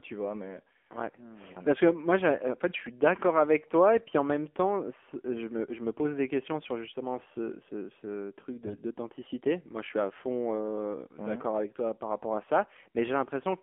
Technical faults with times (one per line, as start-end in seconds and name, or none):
0.00-13.62 AMR narrowband mobile codec
2.70-2.77 AMR bit errors
8.62-8.75 AMR bit errors